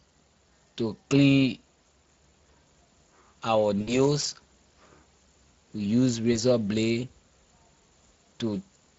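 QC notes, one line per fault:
Throughout, Speex codec: the speech runs through a CELP coder whose damage points to a mid-range setting of roughly 20 kbps, too few bits to model the excitation cleanly. The decoder rebuilds each frame from a coarse pitch and filter estimate, so the voice comes out noisy and hoarse. The damage is plainly audible across the whole clip.
3.81–4.06 s and 6.33–6.37 s, VoIP packet loss concealed by the speech codec: packets dropped out, about 60 ms of audio at the first point and 20 ms at the second. The decoder filled each gap by repeating its last pitch and filter at falling gain, stretching the sound as it fades. Because each frame builds on the previous one, the voice stays weak and smeared for tens of milliseconds or more after packets resume at about 4.06 s and 6.37 s.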